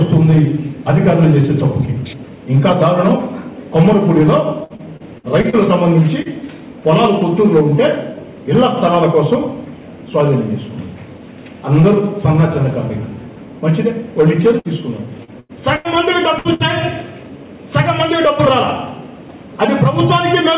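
Repeated packet loss (robotic sound) runs from 4.64 to 5.56 s. Six separate gaps, the longest 57 ms, were each patched by extending the preceding sound, so about a quarter of that stretch is concealment. The audio turns choppy, with fragments dropping out.

Short concealed packet loss follows at 6.22 to 6.28 s, and again at 15.25 to 15.31 s. Each time roughly 30 ms failed to arrive, and the receiver bridged it from the previous sound before blending back in, leaving a brief smear or wobble where a small piece is gone.

A burst of packet loss hits at 14.59 to 14.68 s, then at 15.40 to 15.52 s, 15.76 to 15.88 s, 16.39 to 16.48 s and 16.54 to 16.63 s. Each burst loses about 60 to 90 ms in one block. The concealment holds the last sound as a fading buzz or hiss, and the audio jumps ahead with that portion missing.

Throughout, the call path passes nothing above 4 kHz, which fits a G.711 narrowband codec at 64 kbps.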